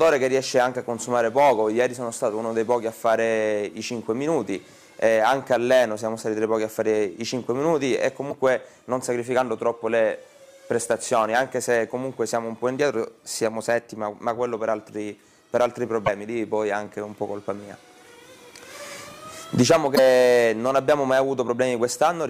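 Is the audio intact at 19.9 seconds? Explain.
No. At 19.92 to 19.99 s there's damaged data in a compressed stream: a short run of the file is corrupted, so the decoder misreads those frames, loses sync and hunts for the next frame header. You hear it as a brief chirp, squawk, click or gap.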